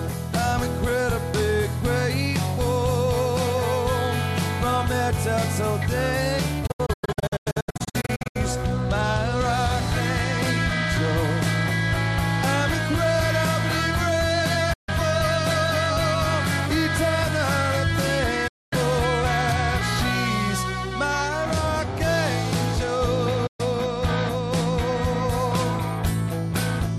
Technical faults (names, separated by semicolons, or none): digital broadcast dropout